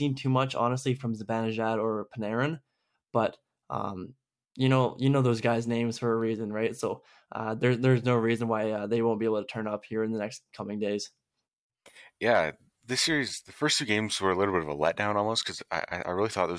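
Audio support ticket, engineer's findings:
Listened through the speech recording and nothing stood out as a technical problem.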